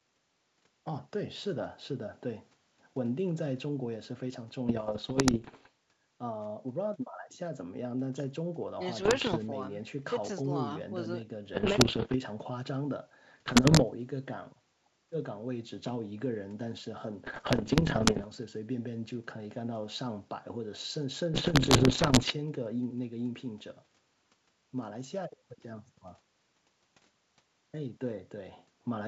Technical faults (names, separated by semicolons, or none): bit errors on an ADPCM link